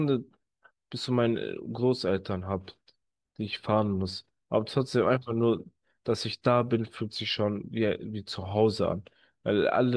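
No technical fault can be heard anywhere in the speech recording.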